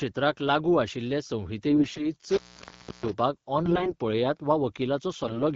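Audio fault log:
1.7–2.1 s (just after "लागू आशिल्ले"), 3.61–3.93 s (just before "पळयात वा") and 5.23–5.43 s, AMR bit errors: the speech keeps its pitch and loudness but turns hoarse, scratchy and gargly. Flipped low-priority bits in the AMR-WB frames, on the order of one bit in ten, misplace the excitation pulses and skew the fine pitch, gain and spectral values. Unlike a dropout, the speech never actually stops.
2.28–3.13 s, intermittent contact: a connection opens for about 0.66 s, so the speech drops out behind a crackle at each edge, leaving only faint hiss until it closes. That gap with clicks at the boundaries sets it apart from the bit errors, where distorted speech continues underneath.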